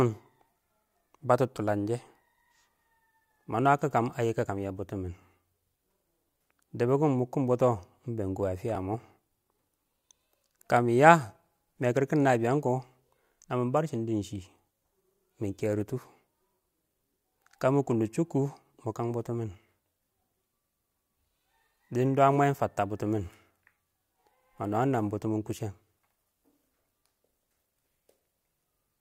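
A speech clip with three skips, at 8.75 s just after "bɛn kɔ ə fɪyə", then 15.59 s and 24.31 s. Each is a skip ahead with no silence, roughly 5 ms gone, likely a dropped buffer (overrun) where samples were overwritten before being read.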